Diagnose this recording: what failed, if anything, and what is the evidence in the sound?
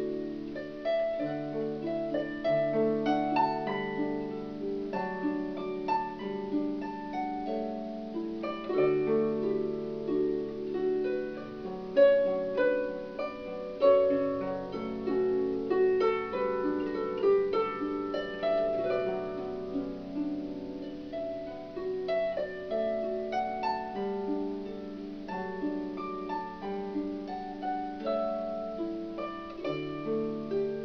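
Nothing failed, and the sound gives no evidence of any fault.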